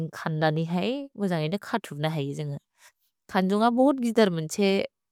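Nothing goes wrong anywhere in this speech clip, so there's no technical fault to point to.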